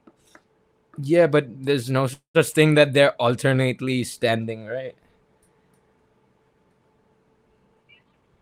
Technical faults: call audio freeze; jitter buffer speed-up

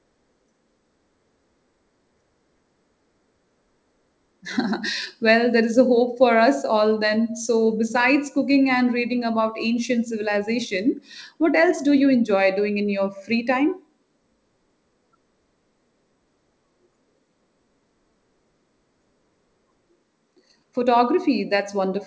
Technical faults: none

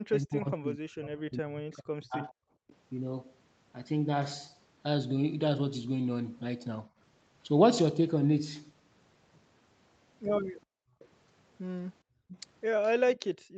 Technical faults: speech suppressed in double talk; background gated by the echo canceller; echo leak

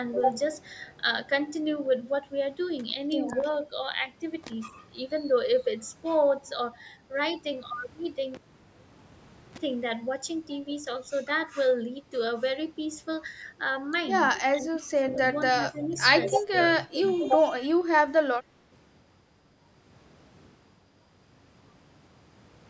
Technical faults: cable pulled and plugged in; echo leak; speech suppressed in double talk

